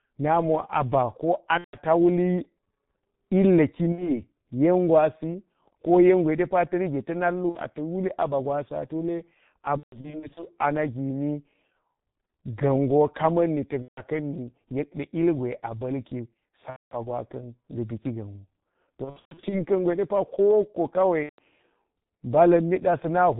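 This speech clip has passed through the G.723.1 codec throughout. It sounds muffled and hoarse, with smeared consonants and nothing above 4 kHz, which fits its 6.3 kbit/s mode. VoIP packet loss concealed by the speech codec breaks in at 1.6, 3.9 (before "yen gwasi ko yen"), 7.5, 9.8 to 10.5, 13.8 (after "kama̱nni tak"), 16.7, 19.0 to 19.6 (before "ka̱n gwe de pa") and 21.2 s. The lost stretches run 60 to 300 ms. The decoder fills each gap by stretching the previous sound into a buzzy tone or coloured noise that fades, and the speech stays weak briefly afterwards.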